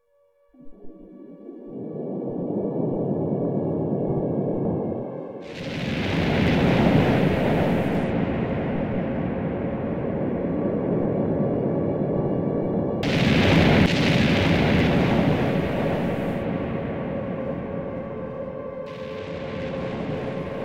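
From 7.88 to 10.08 s and again from 19.18 s to the end, a Bluetooth SBC bit pool drop starves the encoder, which fits a fall from 31 to 15, near 105 kbps. The top sub-bands lose their bits, so the treble dulls and gritty quantisation noise rises.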